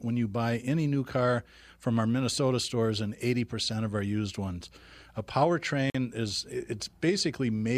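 A Bluetooth stall interrupts the speech at 5.90 s: the sound drops to silence for about 46 ms, until 5.95 s, and then carries on. The cause is likely radio interference on the wireless link delaying audio packets, so the headphones' small playback buffer emptied and output halted until retransmitted packets arrived. It is heard as a brief dead gap punched into the speech, sharp-edged rather than faded.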